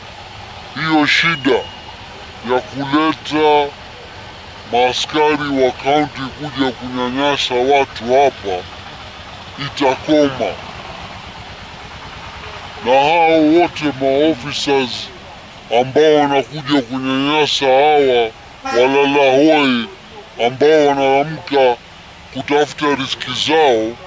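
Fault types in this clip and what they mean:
Wrong sample rate: the whole clip runs at two-thirds speed and sits 7.02 semitones low, which fits audio made at 24 kHz being played back at 16 kHz without conversion. Pitch and tempo drop together by the same ratio, which rules out a pitch shift or time stretch, since each of those changes only one.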